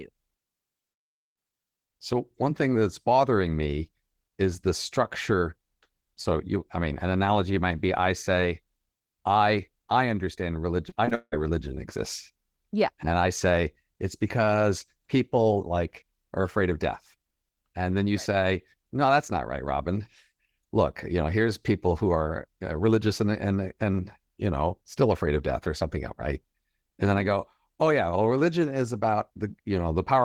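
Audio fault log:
10.89–11.34 s, repeated packet loss (robotic sound): after "I I understand", four rapid gaps are patched by repeating the preceding sound, leaving choppy, robotic audio.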